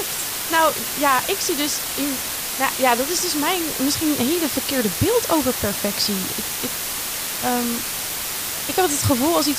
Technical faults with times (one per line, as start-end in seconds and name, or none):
0.00-9.58 low bit depth with dither